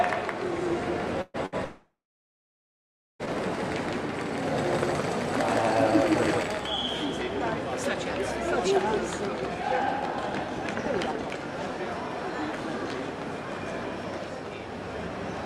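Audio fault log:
0.00–6.43 s, doubled audio track: a second copy of the sound is likely being captured again by a slower path, mixed in about as loud as the original and around 150 ms behind. It is already present at the start, echoes everything without decay or room colour, and stops abruptly at 6.43 s.
1.21–1.37 s and 1.46–1.55 s, burst of packet loss: packets went missing and the receiver filled the gaps by continuing the last sound and fading it, for 125 ms and then 63 ms. Playback then resumes 120 ms and 60 ms further on, with the audio in between skipped.
1.64–3.22 s, long network dropout: no audio arrived for over a second and a half, likely because of a network outage. The receiver continued the last sound and faded it out, leaving 1.24 s of silence. The audio returns with 1.56 s of material missing.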